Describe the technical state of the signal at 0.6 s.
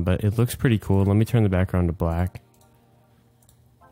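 At 0.6 s the signal is intact, with no audible dropout, distortion, or other technical fault at that point.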